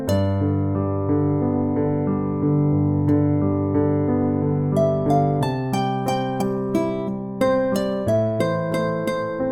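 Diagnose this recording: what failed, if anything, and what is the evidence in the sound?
Nothing failed; no faults detected.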